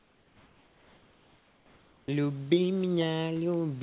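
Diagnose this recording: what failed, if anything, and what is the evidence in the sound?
From 0 to 2.08 s the room background gives way to a steady, featureless hiss about 4 dB quieter. That points to comfort noise in place of the background, likely from discontinuous transmission in call processing. A noise gate would leave silence, but here the pause is filled with synthetic noise.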